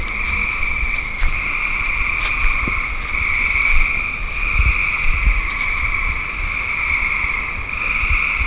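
Everyday sounds, with no technical faults heard anywhere.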